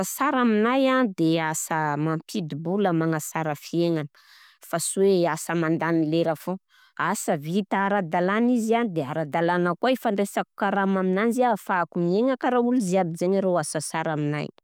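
No technical faults can be heard in the speech, and the signal stays stable throughout with nothing interrupting or degrading it.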